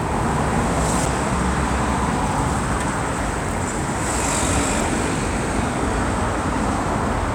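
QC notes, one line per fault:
1.06 s and 4.81 s, CD skip: the laser jumps to another turn of the disc's spiral, so a brief tick-like mute of a few milliseconds breaks the sound before playback resumes elsewhere.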